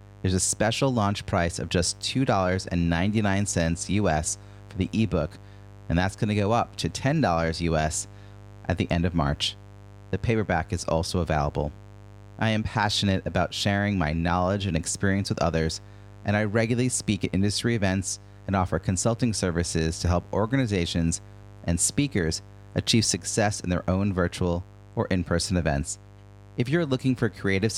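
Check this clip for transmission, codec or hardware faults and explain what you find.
A mains buzz runs under the speech from start to finish. It comes from the 50 Hz supply. Sharp switching spikes, twice per cycle, leak into the signal path. Their harmonics climb into the kilohertz range. The result is a steady, raspy buzz, roughly 20 dB below the speech.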